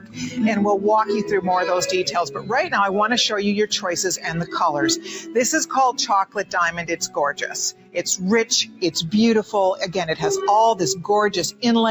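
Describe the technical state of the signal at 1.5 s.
At 1.5 s you're hearing the noise suppressor applied to music or sounds, running the whole clip: it treats sustained material as noise, so tails duck by around 10 dB and the sound pumps, flutters or thins out.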